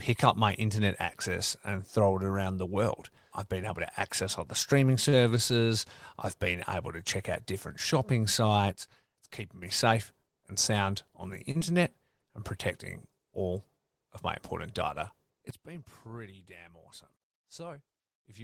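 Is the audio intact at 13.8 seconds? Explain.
Yes, at 13.8 seconds the speech runs through intact, with no dropout, glitch or other fault at that moment.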